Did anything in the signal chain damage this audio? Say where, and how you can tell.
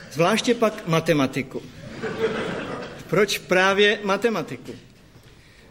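No, nothing in the signal chain audibly damaged this audio, and it carries no detectable faults from any stage.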